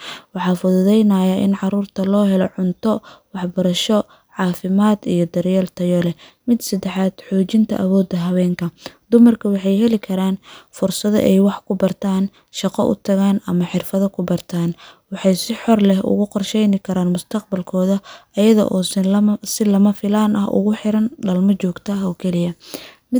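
No technical faults can be heard in this speech recording. There is nothing in the audio that needs to be pinned to a time.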